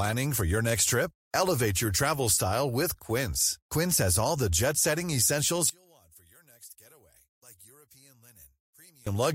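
At 5.70 s, right after "the jet setting essentials", the speech suddenly drops by about 28 dB and stays faint until 9.07 s, with centred voice almost gone and only a faint residue left. The likely cause is one channel inverted: with opposite polarity, the shared centre cancels when summed to mono. A waveform shows a sharp amplitude collapse there; a spectrogram shows everything fading to a weak trace.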